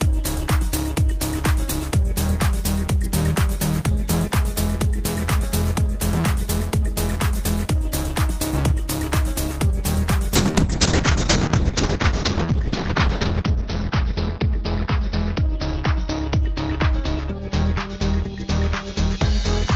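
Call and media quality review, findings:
Call bitrate drop from 10.37 s to end: sound turns coarse and muffled as encoder rate falls from 32 to 6 kbps, bottoming out for about 2.7 s. Encoder bandwidth narrows from 20 kHz to 6 kHz; spectrogram shows energy above 6 kHz abruptly cut off.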